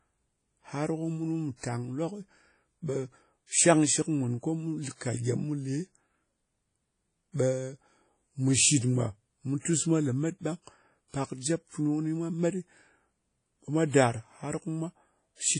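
Right through the speech there's WMA compression damage, likely from a low-bitrate encode, which fits about 32 kbps. Nothing comes through above 10.1 kHz, and the quantisation noise smears into a ringing, washy haze with hiss that swells and fades alongside the signal.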